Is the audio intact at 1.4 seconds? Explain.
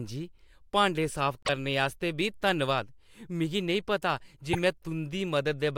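No, right after "भांडे साफ" a corrupt frame was decoded from 1.43 to 1.49 s. Damaged bits in a couple of compressed frames put energy at the wrong frequencies, giving a short chirp, squeak or burst of noise.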